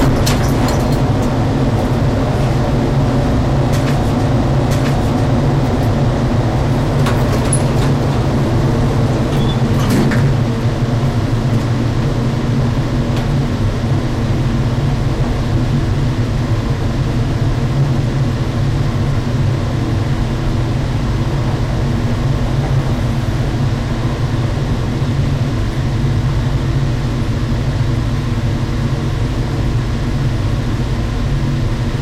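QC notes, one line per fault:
Throughout, hard clipping: the signal's pushed about 11 dB past what the chain can pass, so the peaks get sliced flat, roughly one sample in twenty. Those squared-off tops spray high harmonics, giving a harsh fuzz on every loud moment.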